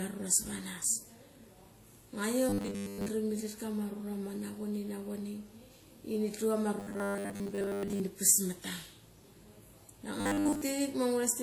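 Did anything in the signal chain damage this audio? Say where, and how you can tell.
Yes. At the codec stage, the audio was likely passed through one lossy codec and then re-encoded by another. The texture is a mix of two different artefact types: the smeared, synthetic top end of a low-rate HE-AAC encode, with WMA's own coding noise on top. The second encoder spent its bits reproducing the first one's damage, and the first codec's cut-off stayed in the result.

In the driver or buffer stage, audio delivery likely fell behind, and the playback side filled the gaps by looping the last short block. This happens from 2.49 to 3.09 s, from 6.80 to 8.00 s, and from 10.21 to 10.62 s. In each stretch the speech turns into a rigid, metallic 100 Hz buzz, which fits a 10 ms buffer repeating. Most of the real audio in those spans is replaced by repeats, so this is robotic sound from repeated short buffers.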